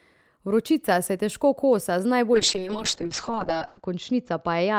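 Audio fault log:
2.34 to 4.79 s, call bitrate drop: from 2.34 s to the end of the clip the speech loses its air and goes rough and watery. The call's bandwidth estimate fell, so the encoder was pushed from 32 kbps down to 6 kbps. At that rate it codes the speech much more coarsely and cuts the top end from 20 kHz down to 8 kHz. It bottoms out at the lowest rate for about 1.46 s.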